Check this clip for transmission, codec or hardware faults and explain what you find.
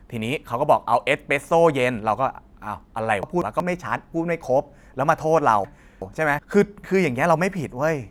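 Two faults of one kind: frames out of order at 3.23–3.60 s and 5.64–6.39 s. Adjacent frame runs of about 186 ms and 372 ms arrived swapped, producing a garbled flutter and no lost time.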